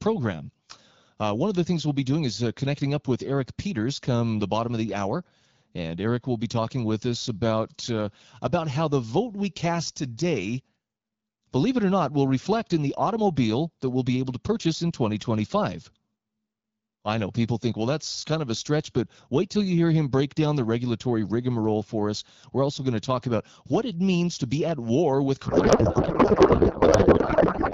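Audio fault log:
25.47–27.74 s, codec payload misread: after "be at war with", the speech turns to garbled warbling noise, likely octet-aligned AMR frames being unpacked as bandwidth-efficient.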